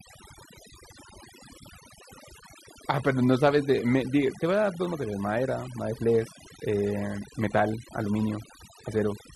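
A speech recording with overdone noise removal throughout: bands near the noise estimate are gated off, leaving twinkling specks in near-silent gaps, and quiet parts of the voice are removed along with them.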